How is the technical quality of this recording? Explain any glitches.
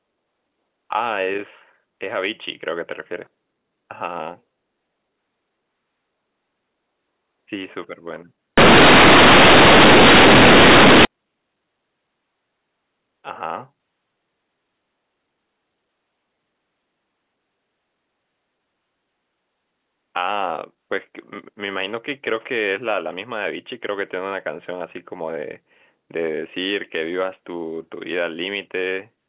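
One serious glitch interrupts the telephone-band speech. Companded audio read as linear, 8.58 to 11.05 s: the A-law bytes play as raw 8-bit samples, unexpanded, so everything blares as harsh, buzzy distortion with loud noise in pauses.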